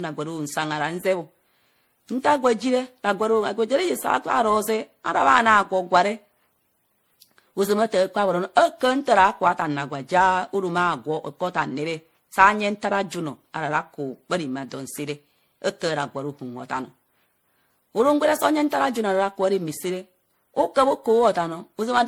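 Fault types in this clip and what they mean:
Generation loss: The speech has a swirly, watery smear and a hollow, scooped tone, with consonant attacks blurred and noise that seems to have piled up rather than coming from a single pass; the band still reaches about 20.8 kHz, so the damage is not simple bandwidth loss. This likely comes from repeated lossy coding, with the character pointing to MP3 at around 64 kbit/s, re-encoded roughly seven times on shifting frame grids.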